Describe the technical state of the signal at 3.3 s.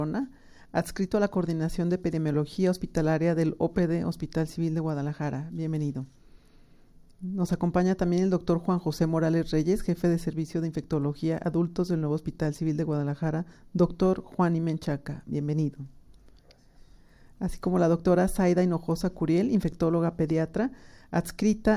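At 3.3 s the signal is intact, with no audible fault at that moment.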